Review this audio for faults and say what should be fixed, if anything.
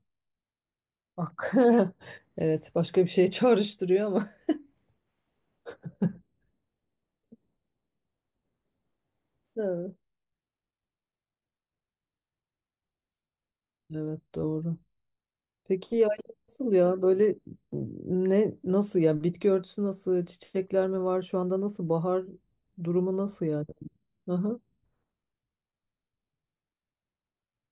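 No faults were found; nothing needs fixing.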